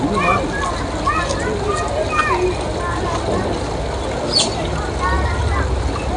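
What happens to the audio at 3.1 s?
At 3.1 s you're hearing the 4-bit ADPCM compression that runs through the whole clip. Each sample is a coarse 4-bit step from a prediction, so a gritty hiss rides on the loud parts, and nothing reaches above 10.7 kHz, which points to a low sample rate near 22 kHz.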